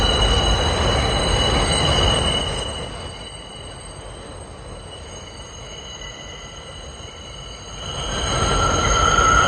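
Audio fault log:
2.08–3.32 s, zipper noise: the level drops by about 15 dB in coarse steps of about 3 dB, around five a second, with no smoothing between them, so each jump puts a small click into the waveform and the fade is heard as a ticking that rides on the sound.
7.60–8.44 s, zipper noise: the level rises by about 15 dB in the same 3 dB steps, faster at around seven a second, giving a quicker zipping rattle until the level settles.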